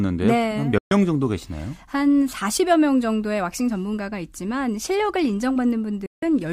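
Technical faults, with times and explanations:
0.78–0.92 s and 6.06–6.23 s: digital broadcast dropout. The speech fades to silence within 3 ms for 0.13 s, then 0.16 s, while the receiver mutes unreadable frames.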